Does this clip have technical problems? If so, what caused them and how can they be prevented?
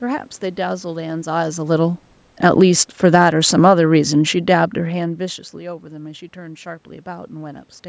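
Yes. From 1.31 s to 5.21 s the speech grows steadily quieter, ending about 7 dB lower, and the room noise behind it sinks by the same amount, so the whole signal is turned down rather than the talker moving away. This is automatic gain falling: the automatic gain control judged the input too loud and lowered its gain gradually. Reducing the input level or increasing microphone distance so the gain control never reacts would prevent it.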